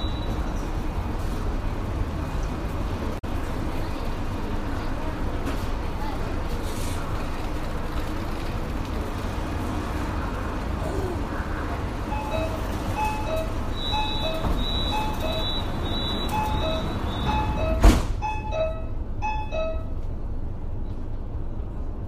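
What you've got here is a recording of sounds with one spot of damaged data in a compressed stream, running from about 3.15 to 3.25 s. For roughly a tenth of a second the decoder hit frames it couldn't read properly, lost its sync and went hunting for the next valid frame header. What comes out in that gap is a chirp, squawk, click or short hole rather than the real audio, before decoding picks up again.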